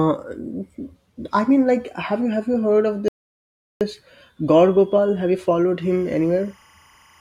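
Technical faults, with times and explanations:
3.08 to 3.81 s, playback stall: The speech cuts to silence for about 0.73 s, then carries on. The player likely ran short of data or had its output thread blocked, so nothing reached the output until it caught up.
5.82 to 7.20 s, timecode bleed: A chirping warble sits well below the speech, roughly 35 dB down, to the end. Linear timecode at 25 frames per second has leaked in. Its square wave flips between tones near 1 and 2 kHz.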